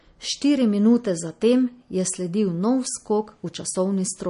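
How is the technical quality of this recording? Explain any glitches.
Quality is held back by compression damage running through the whole thing. Across the speech there's a hard ceiling at 10.6 kHz, plus a watery, swirly texture with chirpy s sounds and smeared onsets. That's likely MP3 compression at a low bitrate, something like 40 kbps. Starved of bits, the encoder chops the treble at a fixed point and drops weaker frequency components, which flicker in and out from frame to frame.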